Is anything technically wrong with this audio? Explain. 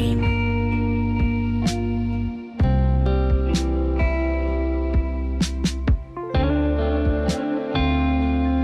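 No, nothing technically wrong stands out here, and it's an easy, untroubled listen all the way through.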